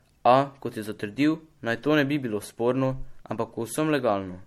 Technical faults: generation loss

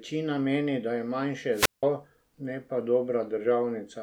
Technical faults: wireless microphone squelch dropout

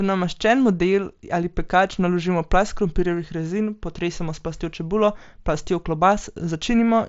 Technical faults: none

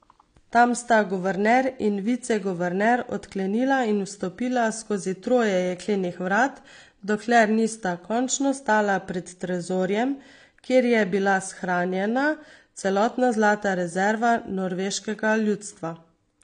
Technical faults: AAC compression

